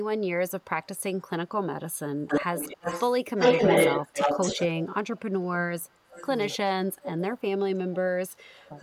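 From 0.48 to 4.84 s there is an echo leak: a copy of the speech trails it by 268 ms, roughly as loud as the speech itself or a little louder. The echo canceller at a loudspeaker end likely failed to remove what its microphone picked up. On a spectrogram, each syllable's harmonic pattern reappears shifted right by about a quarter second.

Overlapping this, from 4.5 to 6.88 s, speech is suppressed in double talk. The level dips by as much as roughly 25 dB, for about one and a half seconds in total. The echo canceller likely mistook the local talker for echo while both sides spoke and turned everything down. The waveform shows abrupt notches in the envelope.

A second echo leak runs from 5.8 to 7.41 s, again 268 ms behind the speech. This time it sits roughly 15 dB down, a faint repeat. It appears as ghostly, weaker copies of the harmonics.

From 7.41 to 8.78 s, speech is suppressed in double talk again. 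Drops reach roughly 25 dB across about a second, giving the same chopped envelope and gaps in the spectrogram.

At 8.6 s, a brief echo leak only about 30 dB down adds a barely visible trace at the same 268 ms delay.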